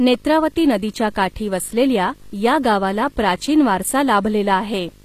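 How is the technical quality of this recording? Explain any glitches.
The recording has two faults, both present for the whole clip: video or display buzz, and plainly audible codec damage.

Video or display buzz runs throughout. A screen or video cable is coupling into the audio path, producing a buzz at the 50 Hz field rate with hash above it, plus a line-rate tone at 15.6 kHz. The interference sits roughly 25 dB below the speech.

HE-AAC compression damage is also audible throughout. The treble sounds synthetic rather than natural, and nothing reaches above 15 kHz. This is likely HE-AAC at a low bitrate, in the region of 24 kbps. The codec keeps only the lower spectrum and rebuilds the treble by copying lower bands upward, so harmonics fail to line up across the crossover.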